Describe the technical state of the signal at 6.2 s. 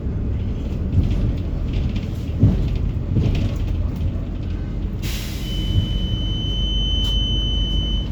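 A feedback whistle runs from 5.37 s to the end of the clip: a thin, steady 3 kHz tone, roughly ten decibels under the sound, swelling and fading slowly in level. It is likely caused by a loudspeaker-to-microphone loop held just at the edge of feedback.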